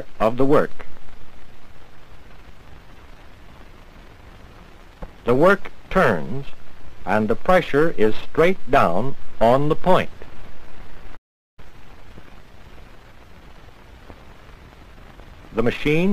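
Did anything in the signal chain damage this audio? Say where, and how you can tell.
Yes: the sound drops to silence from 11.16 to 11.59 s, a 410 ms gap. This is a playback stall, likely the player's buffer running dry.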